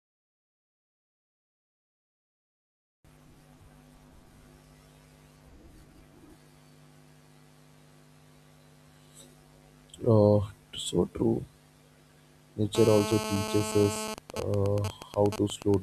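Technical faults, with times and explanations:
12.75–14.14 s: GSM phone buzz. A hard, raspy buzz at about 217 Hz cuts in over the speech, sitting about 8 dB below it. It is rich in harmonics and has nothing to do with the speech itself. A 2G phone close by is on a call, sending radio bursts 217 times a second. The audio circuitry rectifies those pulses into sound. Because the call is active, the buzz holds steady for its full length.
14.18–15.74 s: GSM signalling bursts. Straight after, the buzz breaks into even ticks with a longer 217 Hz buzz twice a second, roughly 10 dB under the speech. The phone is still in the call, but its user has gone silent. So it transmits only short groups of bursts instead of a continuous stream. Each group is rectified by the audio circuit, giving this stuttering, rhythmic pattern.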